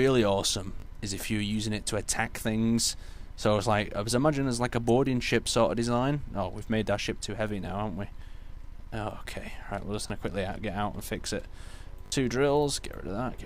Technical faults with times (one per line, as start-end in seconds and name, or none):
0.80 repeated buffer
10.08 repeated buffer
12.06-12.12 repeated buffer